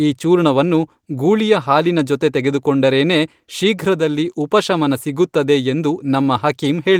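Speech, and nothing is technically wrong with it.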